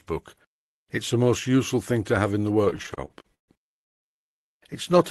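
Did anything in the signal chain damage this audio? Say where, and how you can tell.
Yes, network side: repeated stalls (stutter) from 2.65 to 4.05 s, twelve gaps up to 192 ms where the starved jitter buffer drags out the last sound.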